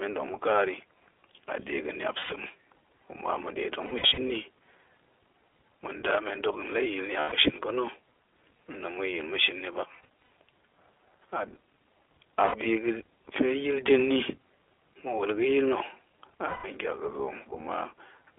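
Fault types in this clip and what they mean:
iLBC codec: A narrowband VoIP codec that codes each 20 ms frame independently. The whole clip is squeezed into roughly 300 Hz to 3.5 kHz, and the speech has a plainly audible rough, slightly synthetic edge, which fits the 15.2 kbps mode.
lost iLBC frames: Dropped packets that the decoder papers over by repeating the last pitch cycle with noise, so each gap sounds like a held, buzzy vowel. There are six, lasting 80 to 240 ms, including one at 7.2 s just before "ga̱shin pa̱na̱". Each recovers almost instantly.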